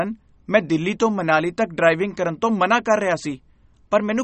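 Throughout the speech there is plainly audible damage that is likely MP3 compression, consistent with a low bitrate around 32 kbps. Nothing remains above 8.3 kHz, so sibilants sound dull and watery. A spectrogram shows a flat ceiling there, with weaker detail flickering in isolated patches.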